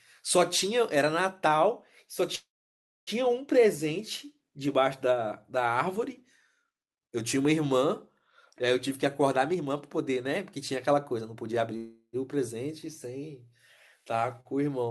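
At 2.35 s the speech hits a call audio freeze lasting about 0.72 s, until 3.10 s. The last bit of sound carries on as a short fading buzz, then there's roughly 0.62 s of dead silence before the speech resumes exactly where it left off. Nothing is lost, but everything after it now runs about 0.72 s late. The likely cause is packets getting held up in transit, so the jitter buffer ran dry and had to fill the gap.

From 9.22 to 11.73 s the jitter buffer speed-up catches up on that backlog. Playback runs at about 114% speed with the pitch unchanged, so the talking sounds a bit rushed. The receiver does this by snipping out lots of tiny pitch-period-sized pieces, which add up to about 0.4 s.

Right after that, at 11.77 s, there's a second call audio freeze, lasting about 0.36 s until 12.16 s. It's mostly a brief fading fill with only about 70 ms of actual silence. Again, nothing is missing, but the speech picks up another 0.36 s of delay.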